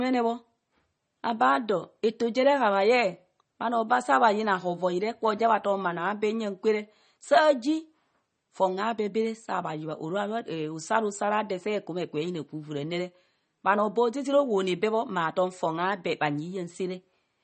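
From start to finish the speech sounds watery and swirly, with metallic chirps on s sounds and nothing above 8.4 kHz. This is likely MP3 compression at a low bitrate, which fits 32 kbps, cutting the treble and dropping weak frequency lines that flicker between frames.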